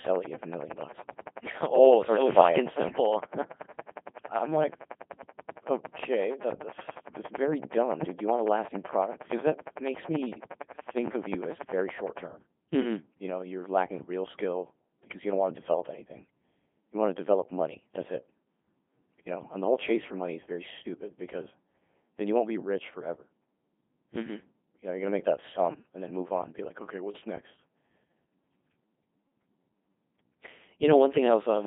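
From start to finish the speech has gone through the Codec 2 vocoder. It's rebuilt from pitch, voicing and envelope rather than the real waveform, so it comes out robotic and buzzy, squeezed into 200 Hz to 3.5 kHz with nothing above 3.6 kHz, a heavy sound that fits the 2.4 kbit/s mode.

Over the first 12 seconds, from 0.07 s to 12.19 s, there's a train of clicks: a regular ticking at 10.7 per second, around 150 in all, peaking roughly 10 dB above the speech and audible in the pauses too. The likely cause is interference or a faulty connection or power supply.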